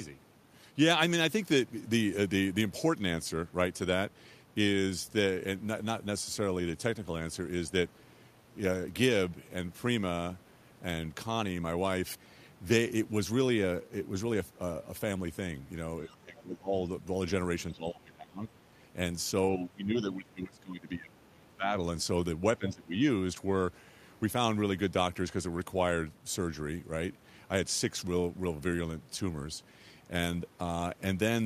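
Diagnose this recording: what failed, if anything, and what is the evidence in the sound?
Between 16.06 and 16.78 s, 17.71 and 18.45 s, 19.54 and 21.73 s, and 22.58 and 23.01 s, the speech sinks sharply, by around 20 dB at its deepest, and around 15 dB in the last dip, with the 19.54 s stretch lasting about two seconds. This is speech suppressed in double talk, likely in the call-processing stage: with both sides talking, the echo canceller couldn't tell the local talker from loudspeaker echo and attenuated everything.

At 16.11 to 16.16 s, inside the first dip, a faint scrap of a second voice comes through, around 30 dB below the speech. This is the other side's voice leaking through, likely also from call processing: the far end played on the device's loudspeaker reached the microphone, and the echo canceller left that brief residue unremoved while it was struggling with double talk.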